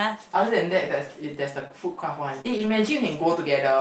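At 1.59 to 1.65 s, a lost packet is rebuilt from error correction. About 40 ms, consistent with two packets, plays from low-bitrate copies, so it sounds rougher and noisier without a gap.

From 1.67 to 1.71 s comes a short concealed packet loss. About 20 ms never arrived, and the decoder extended the preceding sound, leaving a brief smear.

Another short concealed loss follows at 2.41 to 2.46 s, a similar 20 ms patch with a wobble.

Right after, from 2.46 to 2.72 s, a longer stretch is rebuilt from error correction. About 140 ms is decoded from the rough copies, grainier. The Opus call path limits the audio to about 8 kHz throughout.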